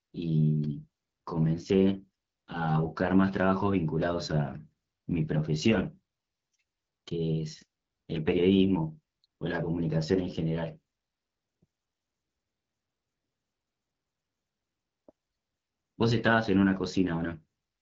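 AMR wideband (HD Voice) codec damage runs throughout: speech above 7.5 kHz is gone, and the rough, raspy texture fits a low rate near 8.85 kbit/s.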